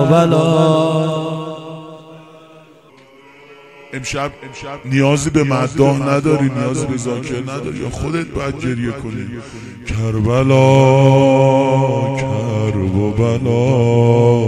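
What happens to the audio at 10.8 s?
At 10.8 s the audio sits inside a section at the wrong speed. The stretch runs from 2.90 s to the end of the clip. Playback there moves at 0.857 times the recorded speed. Because speed and pitch are tied, everything drops about three semitones. The sound turns deeper, slower and dragged. The change arrives abruptly at 2.90 s. The cause is likely a playback or editing step that ran this part on the wrong clock.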